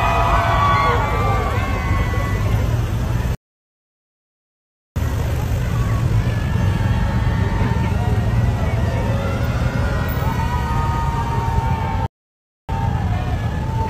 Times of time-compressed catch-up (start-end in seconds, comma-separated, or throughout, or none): 4.96-6.56, 12.69-13.90